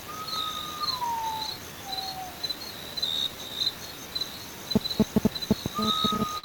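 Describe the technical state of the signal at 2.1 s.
At 2.1 s the sound carries small, unevenly spaced hiccups and a slightly sagging, unsteady tempo. This is clock drift between sender and receiver: the sender's clock runs about 5 percent slow, so the receiver's jitter buffer keeps draining throughout the clip.

The hiccups themselves are repeated timing corrections, running from 0.04 s to 6.30 s. To keep the buffer from running empty, the receiver repeats short pieces of audio, all in the same direction. This plays the material at about 96 percent speed and stretches the span by roughly 300 ms.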